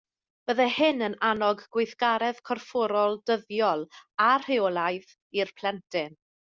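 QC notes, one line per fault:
No faults heard in this speech clip.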